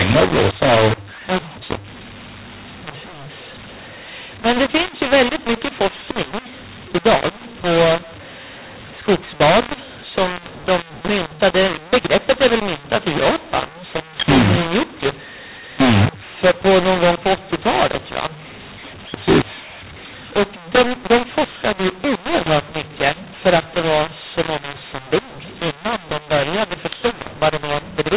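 Harsh, gritty distortion runs through the whole speech clip: level relationships sound scrambled, and the pauses fill with hiss where silence should be. This is a mu-law and A-law mix-up: telephone audio coded as G.711 mu-law, with its normal 4 kHz band limit, is decoded as A-law, so each 8-bit code maps to the wrong level and near-silent samples are lifted well above zero.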